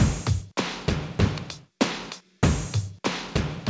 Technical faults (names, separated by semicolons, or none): none